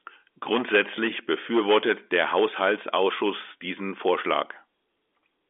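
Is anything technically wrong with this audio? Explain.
No, nothing in this speech clip is technically wrong. It carries the narrow sound of G.711 telephone coding, with the audio confined to roughly the 300 Hz to 3.5 kHz telephone band and nothing audible above about 3.7 kHz.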